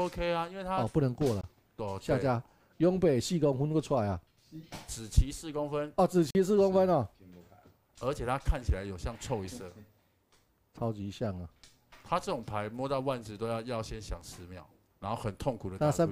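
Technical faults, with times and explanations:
1.41 s to 1.44 s and 6.30 s to 6.35 s, Bluetooth dropout: the sound cuts to silence twice, briefly, and resumes as if it had kept playing. About 21 ms of material is missing at the first gap and about 43 ms at the second. The cause is likely packets arriving too late at the headphones and being discarded, which fits the loss of one packet, then two, of roughly 21 ms each.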